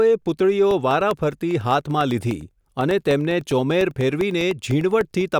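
A speech recording with periodic USB or driver dropouts from 0.71 s to 5.21 s: roughly a millisecond of audio goes silent every 0.1 s, giving an even ten-per-second ticking under the speech. A background task blocking the bus or driver at a fixed interval explains the spacing.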